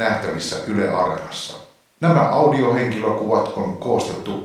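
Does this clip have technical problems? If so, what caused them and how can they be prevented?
No, there are no technical faults in this speech clip to diagnose or prevent.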